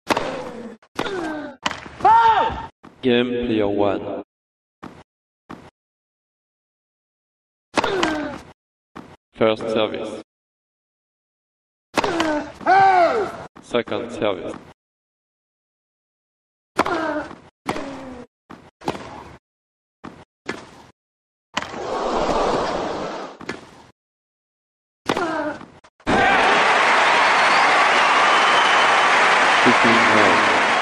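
Nothing goes wrong anywhere in this clip; the audio just carries on without any technical hiccups to point out.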